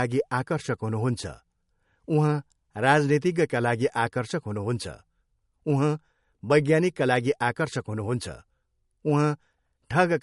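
From start to end the speech carries plainly audible damage, likely from MP3 compression at a low bitrate, with the sound pointing to about 48 kbps. Nothing is present above 11.2 kHz, where the encoder has cut the treble to save bits. Weak frequency lines drop in and out between frames, giving a watery, swirling texture and chirpy s sounds. A simple low-pass filter would only dull the top, without this flickering.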